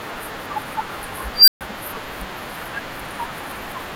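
At 1.34 s the speech is hit by an unstable filter. A high tone near 5 kHz swells for about 136 ms and clips. The recursive filter has diverged. Its numbers overflow, and the audio cuts out for about 131 ms, until 1.61 s.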